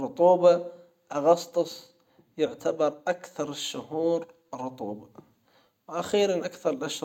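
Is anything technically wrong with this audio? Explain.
No, nothing technically wrong can be heard in this speech clip. The recording holds together with no audible fault at any point.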